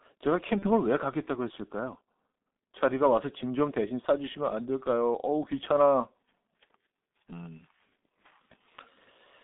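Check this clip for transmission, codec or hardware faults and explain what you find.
Three faults stand out: a low-bitrate telephony codec across the whole clip, one concealed packet loss, and a feedback squeal.

The G.723.1 codec runs throughout at 6.3 kbit/s, confining the speech to roughly 200 Hz to 3.7 kHz. Its coarse 30 ms frames and slow model updates leave the voice muffled and hoarse with smeared consonants. On a spectrogram, energy stops sharply near 3.7 kHz and harmonics look blocky.

VoIP packet loss concealed by the speech codec occurs from 0.59 to 0.65 s, where one 30 ms frame went missing. The decoder repeated its last pitch and filter at falling gain, so the sound briefly stretches and fades. The spectrogram shows smeared, frozen harmonics, and the waveform shows a tapering envelope.

A loudspeaker feedback squeal runs from 1.53 to 2.88 s at 4.2 kHz. The microphone picked up the loudspeaker's output, and at that frequency the loop gain exceeded one, so the tone grew by itself. 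The tone swells over about a second to roughly 15 dB above the speech. A spectrogram shows a single bright horizontal line.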